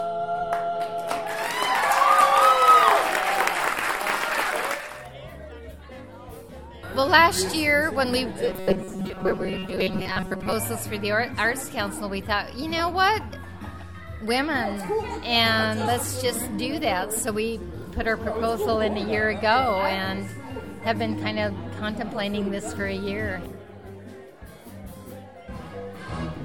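From 8.48 to 10.53 s the sound turns into a rigid metallic buzz near 188 Hz: robotic sound from repeated short buffers, likely from replaying roughly 5 ms segments.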